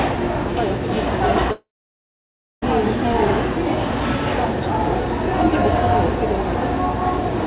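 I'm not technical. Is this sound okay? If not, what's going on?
No. From 1.52 to 2.64 s, likely a long network dropout: the sound trails off into a fading buzz, goes quiet, then returns with that stretch missing.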